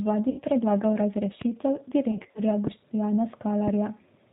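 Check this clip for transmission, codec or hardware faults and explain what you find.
Three kinds of fault are present in this speech clip: G.729 coding throughout, two stretches of concealed packet loss, and two loud pops.

G.729 codec, throughout: The audio passes through an 8 kbit/s G.729-type coder that models each 10 ms frame as a vocal tract filter plus a pitch predictor and a few sparse pulses, discarding everything above 4 kHz. The damage is plainly audible. The speech sounds band-limited, slightly rough and synthetic, lacking the natural excitation detail a waveform coder would keep.

VoIP packet loss concealed by the speech codec, 0.30–0.42 s and 2.11–2.41 s: The first gap loses about 80 ms, which fits four consecutive 20 ms packets. The second loses about 140 ms scattered over 240 ms, with no run longer than 40 ms. In each gap the decoder repeats its last pitch and filter state at falling gain, so the sound smears into a buzzy, fading tone. 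Because each frame builds on the previous one, the speech stays weak and distorted briefly after packets resume.

Loud pop, 1.41–1.44 s and 3.67–3.70 s: Each is a single sharp pop, roughly 15 dB above the surrounding signal, laid on top of the speech, which continues underneath. A sudden voltage step or pulse in the chain, likely from a switch, connector, static discharge or driver glitch, gets added to the signal, and the following circuitry shapes it into a short, hard transient.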